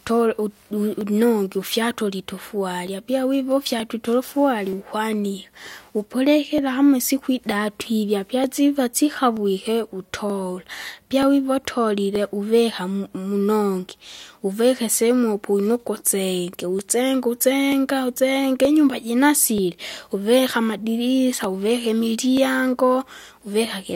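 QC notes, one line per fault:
1.01–23.30 s, clock drift buffer slips: a regular click recurs about every 0.93 s through the speech, around thirty in all. Each click is a small block of samples, roughly thirty, being dropped or repeated at a buffer. The likely cause is two devices running on independent clocks that disagree by something on the order of 700 ppm, so the buffer between them drifts until it has to slip and recentre.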